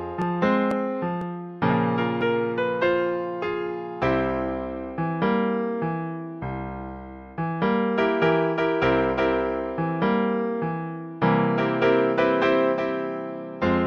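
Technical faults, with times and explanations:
0.22 to 2.21 s, periodic USB or driver dropouts: a background task stalls the USB bus or audio driver every 0.5 s, and about a millisecond of audio is skipped each time, about five in all, so the signal jumps and regular ticks are heard.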